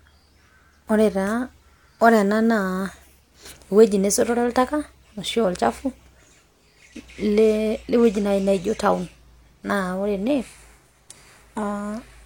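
A speech recording with an adaptive stream at a lower bitrate from 6.89 s to the end. The switch is abrupt and gapless, with nothing above about 16.2 kHz, which fits a drop from roughly 96 kbit/s AAC to 32 kbit/s HE-AAC after the connection slowed.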